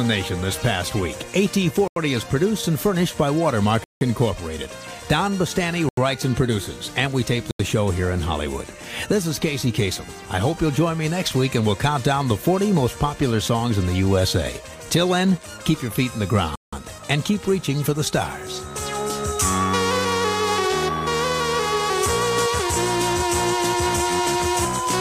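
Blocks of digital silence occur at 1.88, 3.84, 5.89, 7.51 and 16.56 s. Each lasts 85 ms, or 171 ms at 3.84 and 16.56 s, matching unfilled 4096- or 8192-sample buffers. Unlike a faded dropout, the sound cuts straight to silence and back with no fade.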